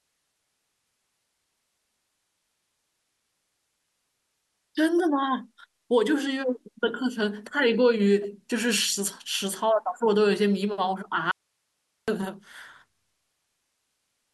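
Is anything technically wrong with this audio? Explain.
Yes, there's an audio dropout to a faint residue from 11.31 to 12.08 s. The speech cuts out abruptly for about 0.76 s, leaving only hiss roughly 50 dB down. That's likely the signal feed breaking while the path after it stayed live.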